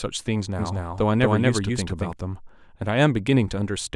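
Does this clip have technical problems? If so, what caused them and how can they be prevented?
Yes. A doubled audio track runs from 0.59 to 2.13 s, likely because the signal was captured a second time through a slower route or an edit left two copies overlapping out of step. A second copy of the speech, at about the same loudness as the first, trails roughly a fifth of a second behind. It has no decay or room colour, so it sounds like a hard, stuttering repeat, and it cuts in and out abruptly at both ends. To prevent it, monitor and record each source through only one path, and check edits for overlapping duplicate regions before export.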